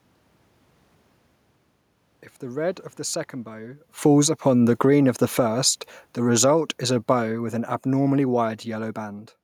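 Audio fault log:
3.9–9.15 s, automatic gain falling: after "of the second bow" the gain control lowers its gain by about 14 dB, so the speech and the room noise sink together.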